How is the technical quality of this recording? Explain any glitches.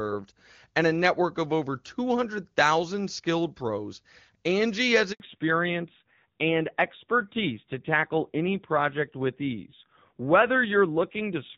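The recording has two linked faults around the five-second mark: a brief dropout followed by a permanent loss of bandwidth. Before that, the speech carries the full wideband character of HD Voice with little or no audible coding damage, which fits AMR-WB at its top rate of around 23.85 kbit/s.

Handover gap, 5.12 to 5.20 s: The speech cuts out for 80 ms. This is the signature of the call being moved between networks. While the link is re-established, no speech frames reach the receiver, so the decoder has nothing to play. The speech fades within a few tens of milliseconds, sits in silence until the new connection delivers audio, and whatever was said in that window is gone.

Fallback to narrowband, 5.20 s to the end: Directly after the gap, everything above 4 kHz disappears and stays gone. This indicates that the new link could not carry HD Voice, so the call renegotiated down to the older AMR narrowband codec. 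The coarser coding and reduced bandwidth point to a low AMR-NB rate of around 7.4 kbit/s. The speech becomes duller, loses its crisp consonants, and takes on a rougher, boxy texture compared with the first half.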